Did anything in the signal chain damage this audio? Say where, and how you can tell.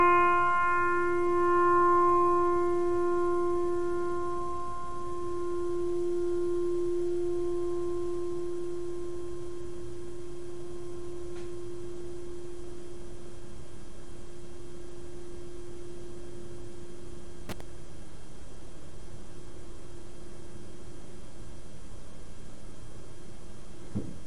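Yes. The damage sits in the analogue wiring: a loose connector crackle from about 17.49 to 17.61 s, a burst of roughly 0.11 s. A worn or dirty contact is rapidly making and breaking as it shifts, so the signal is chopped into fragments and any DC on the line turns each break into a pop. The irregular, scratchy spacing of the clicks is what distinguishes it from a digital buffer dropout, which produces clean, evenly spaced gaps or repeats.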